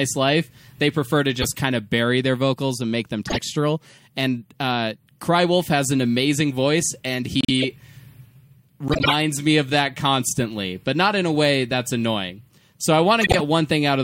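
Speech with five corrupt frame decoded bursts: 1.42–1.57 s, 3.27–3.39 s (after "vocals and make them"), 7.41–7.65 s (after "an amazing voice and"), 8.88–9.13 s (before "me of that constantly") and 13.21–13.41 s. Each spans a handful of damaged compressed frames that the decoder played anyway. Misread gains and codes throw energy into the wrong frequencies, giving loud noise blips. On a spectrogram each shows as a short vertical smear of stray energy. In the waveform each is a sudden jagged spike.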